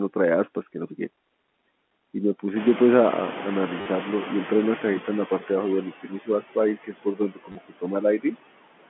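Noise suppressor artifacts run through the whole speech clip. The suppressor pulls the background down by about 21 dB, and the noise sinks between the words and rises under them.

From 2.56 to 5.33 s comes noise suppressor catching up. The room noise jumps about 19 dB, and the suppressor first removes only about 9 dB. It then sinks the noise over 2.77 s.

At 3.81 to 3.86 s there is packet loss with the last packet repeated. 50 ms is patched, which fits five 10 ms packets. It gives a robotic stutter buzzing near 100 Hz.

Speech cut by the noise suppressor follows from 5.85 to 6.57 s, with drops of about 17 dB. Around a third of a second sounds swallowed.

The same fault returns from 6.76 to 7.85 s, dropping about 20 dB over roughly half a second. Inside that span, at 7.52 to 7.55 s, another 30 ms repeat stutters. That fits three 10 ms packets.

A last cut, from 8.01 to 8.36 s, dips about 18 dB. 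Roughly a tenth of a second of sound turns faint.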